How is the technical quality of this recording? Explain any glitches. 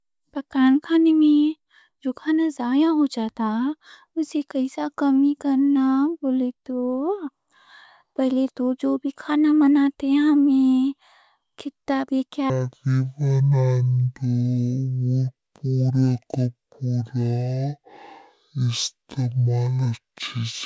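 The recording has one clear fault, affecting its final stretch.

Wrong sample rate, from 12.50 s to the end, just after "کتّا بھی": the samples play at half their intended rate with no conversion. This fits 32 kHz audio played back at 16 kHz. Speech drops to half speed and a full octave (12 semitones) lower, so it sounds slow, deep and drawn out.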